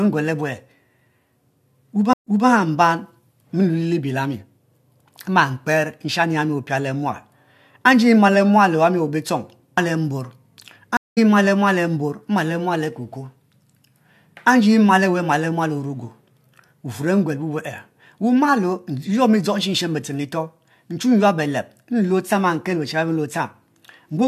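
A stream reconnect happens twice: the connection dropped and the player restarted its decoder mid-stream. From 2.13 to 2.48 s, 0.13 s of silence ends with playback jumping back 0.21 s, repeating that stretch. From 10.97 to 11.18 s, a 0.2 s gap skips roughly a fifth of a second before "ma le".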